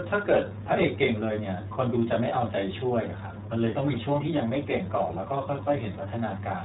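Speech coded throughout with the iLBC codec: nothing passes above 3.8 kHz, and plainly audible rough, synthetic texture, fitting 30 ms frames, distinguishes it from simple band-limiting.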